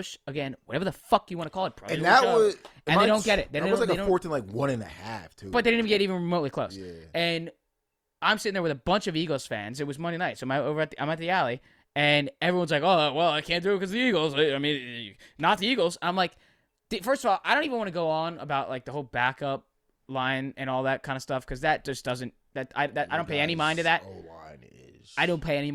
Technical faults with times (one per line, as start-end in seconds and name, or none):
0.00-6.00 adaptive stream starting at a low bitrate